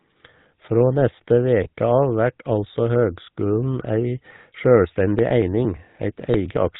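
The whole clip runs through a GSM full-rate codec, and the damage is plain: a buzzy, gravelly roughness on the speech and nothing above 4 kHz, which fits the old 13 kbps full-rate coder rebuilding the voice from a vocal-tract model and coarse pulse excitation.

At about 1.64 s there's a lost GSM frame, roughly 20 ms of audio. The decoder papers over it by repeating the last good frame's settings, so you get a short, rough, metallic ring instead of a clean gap.

From about 4.85 s to 6.68 s come periodic USB or driver dropouts, one every 0.115 s, around fifteen in all. Each skips about 10 ms of audio outright, so the speech ticks and jumps in a steady rhythm, like something was stalling the bus on a timer.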